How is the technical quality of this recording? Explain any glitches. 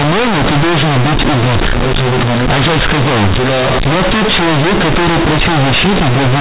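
The quality is poor. One fault runs through the whole clip.

From start to end, the speech suffers from companded audio read as linear. The A-law telephone bytes are played back as plain 8-bit samples, with no expansion step. Every sign change swings the output across half its range, so quiet passages become as large as loud ones. The result is very loud, buzzy distortion, with strong hiss filling the pauses. The telephone coding still passes nothing above 4 kHz.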